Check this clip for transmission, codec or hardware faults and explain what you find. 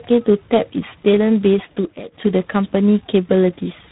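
Two faults are present. Tandem speech coding runs throughout: roughness, muffling and warble, with nothing above 3.9 kHz, exceed any single codec, consistent with iLBC followed by G.726 at 24 kbit/s.

A loudspeaker feedback squeal runs from 1.07 to 2.23 s: a 4.4 kHz tone swells over about a second to roughly 5 dB above the speech, unlike a steady interference tone.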